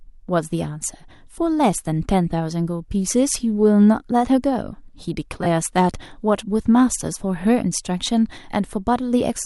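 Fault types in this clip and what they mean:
Lost LE Audio frames: from 5.43 to 5.46 s the speech briefly smears into noise, because the LC3 decoder fills the dropout by replaying its last spectrum with randomised signs. The 22.5 ms of missing audio fits about three lost frames.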